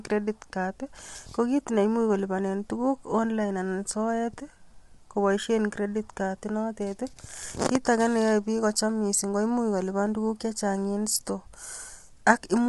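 From start to finish the speech sounds rough and grainy, with a hard ceiling at 11.7 kHz. This is likely low-delay AAC compression, plausibly AAC-ELD near 32 kbps, whose short frames blur pitch harmonics. A spectrogram shows smeared harmonics and nothing above 11.7 kHz.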